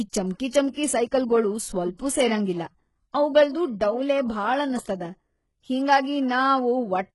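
HE-AAC compression damage runs through the whole speech clip, and heavily. The sound is likely from that codec: only the lower spectrum seems genuinely coded, with the treble rebuilt by copying lower bands upward under a coarse envelope, which fits a very low bitrate around 12 kbps. The top end keeps some brightness but nothing reaches above 11.5 kHz, and the copied harmonics don't line up with the real ones, so sibilants come out gritty, metallic and lispy.

Pre-echo appears from 1.96 to 1.99 s, a smear about 30 ms long ahead of a sharp onset. The codec spreads its quantisation noise evenly across a transform block, so when the attack lands late in that block, noise scaled to the loud part also fills the quiet gap before it. The result is a brief hiss leading into the onset, which itself sounds softened and blurred rather than crisp.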